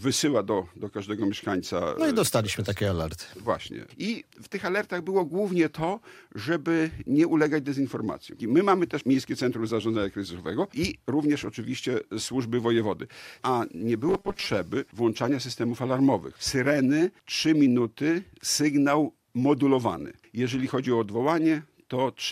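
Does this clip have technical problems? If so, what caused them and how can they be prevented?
Yes: from 14.09 to 14.46 s the sound turns into a robotic 200 Hz buzz, likely from repeated short 5 ms buffers replacing about half the real audio. Giving the playback path a larger buffer so fresh audio arrives in time should prevent it.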